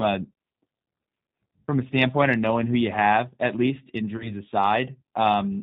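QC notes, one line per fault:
throughout: G.729 codec at 8 kbit/s, plainly audible; nothing above 4 kHz gets through, and the pulse-based rebuild leaves the speech rough and a bit synthetic.
4.17–4.33 s: VoIP packet loss concealed by the speech codec, just after "you have at least." A 30 ms gap, which fits one lost packet, gets bridged by the decoder stretching its last sound into a fading buzzy tone or coloured noise, and the voice stays weak or distorted for tens of milliseconds or more afterward.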